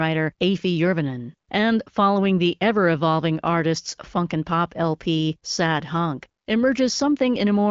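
No technical faults are audible.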